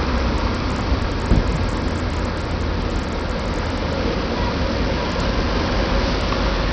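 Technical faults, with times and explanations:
Throughout, Bluetooth SBC compression, likely the cause: nothing reaches above 8.6 kHz, and coarse quantisation leaves gritty noise and flickering treble. On a spectrogram there is a hard ceiling at 8.6 kHz with patchy, blocky upper bands, consistent with a starved bitrate near 64 kbps.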